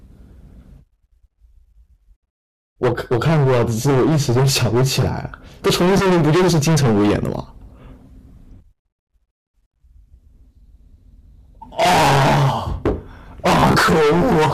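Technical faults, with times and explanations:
5.66–7.40 s, 11.80–12.92 s and 13.46–14.53 s, hard clipping: a harsh fuzz rides every loud syllable, as the speech is driven about 22, 26 and 21 dB past what the stage can pass, so peaks are cut flat and the squared tops spray high harmonics.
5.98–6.06 s and 13.60–13.77 s, Bluetooth stutter: the first is a brief hiccup where about 15 ms of sound repeats, which fits one late packet. The second is a choppy machine-gun patter, with about 91 ms of repeats scattered over about 150 ms and the longest run about 30 ms. In both, the receiver replayed its last buffer until data returned, and the speech resumed as if it had played on.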